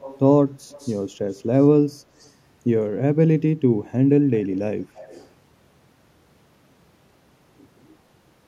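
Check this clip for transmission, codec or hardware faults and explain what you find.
The speech carries echo leak, heard at 0–0.19, 0.71–1.0, 1.31–1.43, 1.59–1.67, 2.19–2.31 and 4.95–5.28 s. A faint copy trails the speech by 200 ms, roughly 20 to 35 dB quieter. A loudspeaker's echo canceller likely missed part of its microphone pickup and sent it back.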